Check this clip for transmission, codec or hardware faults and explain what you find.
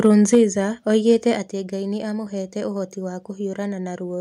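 The clip has two related hardware-side faults: brief distortion on peaks and two sudden drops in level.

Microphone overload is heard at 0.04–0.07 s, 0.33–0.40 s and 1.09–1.13 s, peaking about 1 dB, 4 dB and 1 dB over full scale. The loudest moments gain a harsh, crackly edge. The likely cause is the input level driving the converter past its limit and flattening a small share of each peak's waveform.

Microphone volume stepped down at 0.35 s (about 3 dB) and 1.35 s (about 4 dB). Voice and background fall together in a single step, the first inside the strongest overload. This is likely the call software cutting the device's input gain in response to the clipping.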